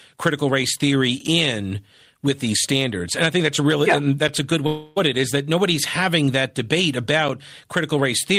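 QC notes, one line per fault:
1.27, 4.28 and 7.29 s: gap between chunks. Three short holes of about 6.5 ms, spaced 3 s apart. The first falls between "critical race theory" and "in with these standards", the second between "that's a really yeah" and "a good". The regular spacing fits 3-second chunks with silence at each join. No sound is lost.
4.67–4.98 s: long network dropout. After "a good", about 0.3 s of speech is missing. A fading buzz or hiss continuing the last sound fills the gap, with no true silence. Speech resumes at "it is that nobody's". The likely cause is audio that never arrived, which the receiver covered over.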